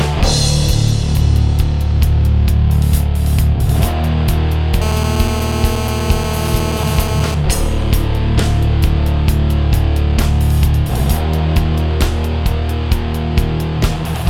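From 4.82 to 7.35 s a hard, raspy GSM phone buzz sits about 10 dB below the sound, steady throughout, as during a call. A nearby handset's 217 Hz transmit bursts are being rectified by the audio circuitry. Unlike smoother 50 or 60 Hz mains hum, it rasps with dense harmonics.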